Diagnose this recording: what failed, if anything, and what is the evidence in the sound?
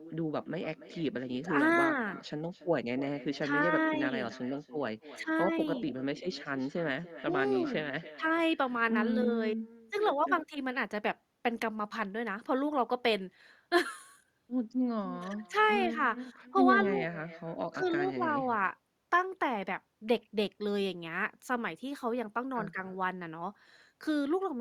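Call processing failed: echo with no canceller. Throughout the speech, each phrase returns roughly a third of a second later, about 15 dB down and thinner. Uncancelled loudspeaker pickup at the far end shows as a faint, delayed copy of every syllable on a spectrogram or waveform.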